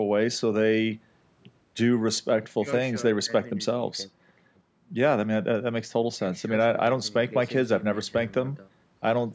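No faults turn up anywhere in this speech; it carries the usual call microphone processing, with the lowest bass trimmed away and nothing above 8 kHz, and that's just how a call path normally sounds.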